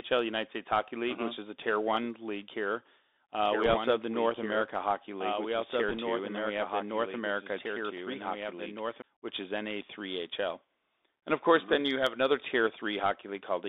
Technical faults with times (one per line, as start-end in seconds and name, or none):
0.00-13.69 Bluetooth CVSD headset codec
3.44-9.02 doubled audio track
3.66-3.74 bit errors on a Bluetooth voice link
5.89-5.98 bit errors on a Bluetooth voice link